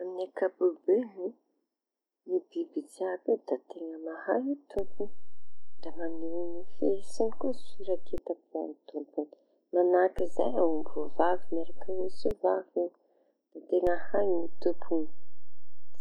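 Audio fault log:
4.79–8.18 s, 10.19–12.31 s, 13.87 s to end: DC step, the waveform's zero line jumps by about -27, -26 and -25 dBFS, heard as a low thump at each jump while the speech carries on unchanged, unlike a dropout.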